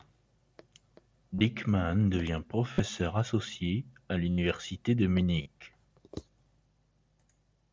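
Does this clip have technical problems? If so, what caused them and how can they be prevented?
Yes. Concealed Bluetooth headset packet loss occurs at 1.35–1.41 s, 2.73–2.80 s, 4.31–4.38 s and 5.42–5.46 s, each gap lasting about 40–70 ms. When packets from the headset were lost, the phone filled each gap by repeating the best-matching slice of the last ~20 ms, so the sound turns into a brief buzzy, held tone with a slight warble as real audio resumes. On a waveform these spots show identical repeating cycles at constant amplitude. On a spectrogram they show frozen, evenly spaced horizontal harmonic bands cut off sharply at both ends, within the mSBC codec's band up to 8 kHz. To prevent it, keep the headset close to the phone with a clear line of sight and away from Wi‑Fi and other 2.4 GHz interference.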